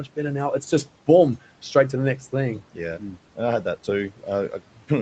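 Between 4.52 and 4.9 s, the noise suppressor misjudged part of the speech as background and cut it along with the room noise, which sits about 23 dB below the speech. Around a tenth of a second in total is pulled down by up to about 11 dB, so those sounds come across swallowed and faint, while the call microphone processing leaves nothing above 8 kHz.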